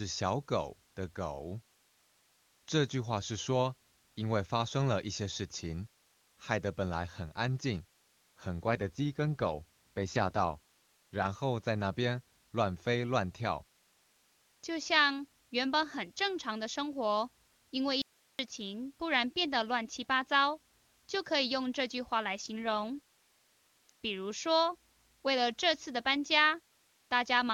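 From 8.66 to 11.26 s the speech turns rough and buzzy, more synthetic in texture, yet the bandwidth stays the same and nothing drops out. That is an AMR rate drop: a weak radio link pushes the wideband codec down from its clean 23.85 kbit/s mode, where the sound fits a step to about 8.85 kbit/s, with the freed bits going to error protection. The same roughness returns from 22.41 to 23.90 s, then clears as the rate climbs back.

At 18.02 s the speech cuts off abruptly, leaving only a thin hiss about 40 dB below the normal level, and it snaps back at 18.39 s after a 0.37 s gap. This is an audio dropout to a faint residue. The sharp edges rule out a pause or a fade. The hiss shows the path after the break stayed live, so the likely cause is a brief loss of the incoming signal upstream.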